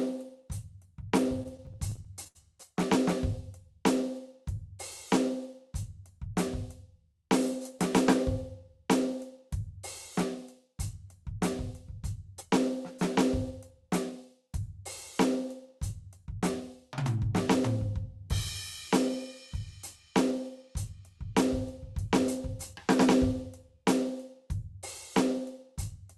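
Right at the start, from 1.43 to 2.37 s, the music hits a run of repeated stalls, a proper stutter. Packets were coming in late, so the jitter buffer kept running dry, ten times in under a second. Each time the receiver stretched out the last bit of sound until fresh audio arrived, for about 176 ms of filler in all and 75 ms at the longest gap. Nothing is actually lost, but the passage limps and drags.

Later there are three stretches of jitter buffer speed-up: 13.51 to 14.12 s at 105%, 17.02 to 17.68 s at 106%, and 19.08 to 21.00 s at 103%. The buffer had built up more audio than it wanted, so it trimmed out tiny pitch-period slices, roughly 40 to 50 ms in all per stretch, to catch up. Pitch holds steady, but in the first two stretches the tempo briefly rushes ahead, and the music loses its steady beat. All of this goes through a call-style Opus path, with highs rolled off around 12 kHz and coding noise that points to roughly 40 kbps.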